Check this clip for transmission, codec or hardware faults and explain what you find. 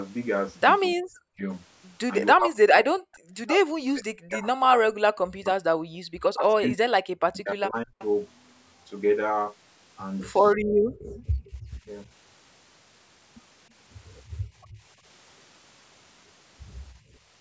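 Yes, there are faults. The talker is repeatedly pushed down, the room background drops out in bursts, and faint delayed copies of the voice leak through. All three point to a call's echo canceller.

Speech suppressed in double talk: From 0.95 to 8.01 s, the voice dips and breaks up in pieces for around four seconds in total, at worst falling about 40 dB. A brief dip of about 10 dB follows at 11.85–11.89 s. This is likely the canceller confusing the talker with loudspeaker echo and turning both down.

Background gated by the echo canceller: The room sound drops out at 5.91–6.07 s by about 37 dB and at 10.56–11.56 s by about 39 dB. Shallower dips of about 11–12 dB follow at 14.38–14.82 s and 17.0–17.19 s. Each time, the canceller clamps the microphone while the loudspeaker plays, then releases it.

Echo leak: A faint repeat of the voice, about 25 dB below the speech, is heard at 7.99–8.05 s and 11.17–11.65 s. 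It trails the original by about 0.32 s. This is likely residual loudspeaker pickup that the loudspeaker side's canceller failed to remove and sent back.

The call's microphone processing, which passes nothing above 8 kHz, is normal.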